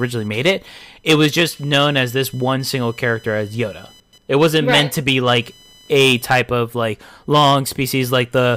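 Computer activity noise runs from start to finish, a thin buzzing chirp pulsing at around 1 kHz, roughly 35 dB below the speech. Processor or graphics load is disturbing the shared ground. A spectrogram shows a harmonic comb near 1 kHz, and the waveform shows a fine ripple in the pauses.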